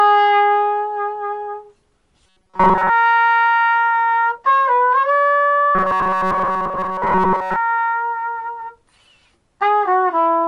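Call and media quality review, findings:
Rigid metallic buzz at a fixed 188 Hz, 2.26–2.90 s and 5.75–7.56 s; sound still roughly traceable underneath. Robotic sound from repeated short buffers, likely a starved playout buffer looping about 5.3 ms chunks, with most of the real audio skipped.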